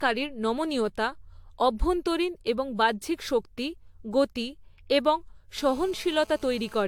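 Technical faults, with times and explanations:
Throughout, generation loss: the speech sounds swirly, smeared and hollow, with blurred attacks and nothing above 19.2 kHz. This is likely from repeated lossy re-encoding, around five passes, each re-quantising on a shifted frame grid, which fits AAC-LC at about 96 kbit/s.
5.57–6.83 s, GSM phone buzz: right after "বাহ্যিক শক্তি গতি এবং", a hard, raspy 217 Hz buzz rich in harmonics sits about 25 dB below the speech and holds steady, as from a nearby phone on a call whose radio bursts the audio circuitry rectifies.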